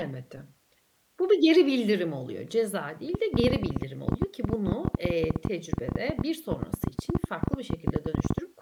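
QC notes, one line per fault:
3.15–8.39 s, train of clicks: a run of around seventy near-identical pops, unevenly spaced at about 13.4 per second, ticking over the speech and right through the pauses, peaking about 15 dB above it. Likely interference from nearby gear or a faulty connection or power supply.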